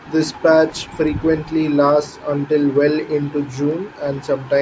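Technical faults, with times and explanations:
1.08 s and 3.71 s, dropped samples: the stream likely lost a handful of samples at each point, a small fraction of a millisecond, so the waveform leaps to a later value. Too little is missing to remove any speech, but each jump sounds as one sharp click.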